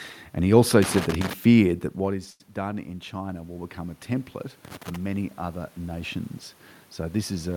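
At about 1.97 s the level drops as the talker moves back from the mic, with the input falling about 13 dB, and the automatic gain rising kicks in. Between 1.97 and 4.38 s the control slowly adds about 4 dB to catch up. You hear the voice and the room noise swell together over those couple of seconds rather than jump. Since it only recovers about 4 dB of the 13 dB lost, the speech still sits quieter than before.

Inside that swell, from 2.30 to 2.41 s, there's a short stall from a late packet. A packet didn't arrive in time, the jitter buffer ran dry, and the receiver held the last bit of sound for about 95 ms until the data showed up. It then picked up right where it left off, so nothing is lost, but one sound hangs a touch too long with a slight buzz or dip, and everything after lands about 95 ms later.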